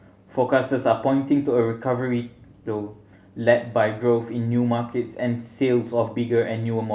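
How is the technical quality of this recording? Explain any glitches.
No glitches turn up anywhere in this speech recording. The audio carries on steadily, with nothing to single out.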